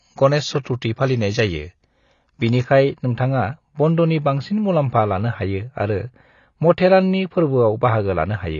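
From the start the speech is band-limited, with nothing above about 6.9 kHz, and the codec damage is plainly audible: a dull, smeared sound with a warbling, fizzy edge on sibilants and held vowels. This is likely AAC compression at a low bitrate, around 24 kbps AAC-LC. The lowered cut-off and quantisation against a hearing model leave thin, patchy upper bands. What separates it from a plain low-pass filter is that grainy, shifting texture: a simple filter would sound muffled but clean.

At 0.63 to 0.65 s comes a pre-echo. For about 24 ms a short hiss leads into a sharp attack, and the attack itself sounds softened. The codec spread its quantisation noise across the whole transform block, so noise sized for the loud onset also filled the quiet moment just before it. Unlike a click or dropout, it is a brief smear of noise tied to an attack rather than a break in the sound.

From 2.64 s to the end there is channel delay, heard as comb filtering. 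One channel arrives roughly 4 samples late, about 0.07 ms, and summing the two to mono cancels shared content at evenly spaced frequencies, with the first notch near 7 kHz. That notch sits right at the codec's cut-off, so the change shows as an added dulling at the very top from 2.64 s on. Because it starts at a fixed point and stays steady, it is a fixed notch pattern rather than codec warble.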